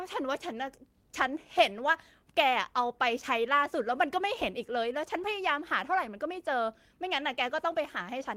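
No audible technical faults.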